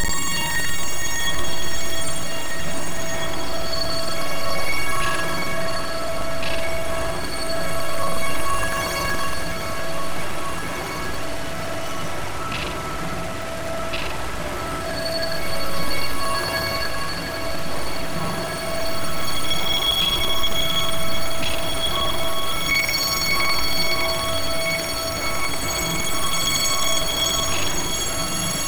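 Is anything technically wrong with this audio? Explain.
Yes. Buffer tearing runs through the whole clip. The writer and the hardware reader have slipped, so they cross inside each period. About a fifth of every buffer replays audio from roughly 100 ms earlier, with hard joins. This gives a rattling buzz at 21.5 Hz, which fits a 2048-sample buffer, and it sounds only when there is signal.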